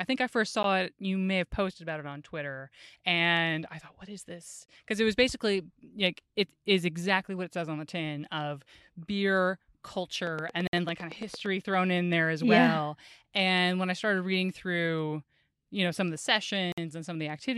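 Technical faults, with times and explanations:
0.63 s, 4.66–4.68 s, 10.67–10.73 s, 16.72–16.78 s: gap between stream segments. The four hard-edged silences last 12.5, 24, 58 and 54 ms. The first falls between "I think I first" and "it you may have", and the last comes after "know some of the". The timestamps of consecutive 2-second segments fail to line up, and the player pads the shortfall with silence. The speech stops abruptly and resumes with nothing missing, only delayed.
10.27–11.47 s: train of clicks. About ten sharp, similar pulses arrive at a regular 8.9 per second, peaking around 10 dB above the speech. The run ends just before "thrown in there as" and overlaps the 10.67 s gap. The uniform shape and steady spacing sound like a ticking laid over the speech. This points to a likely cause of electrical interference or a faulty connection or power supply injecting periodic impulses.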